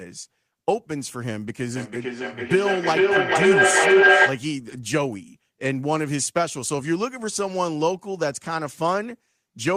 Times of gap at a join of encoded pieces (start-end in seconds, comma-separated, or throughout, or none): none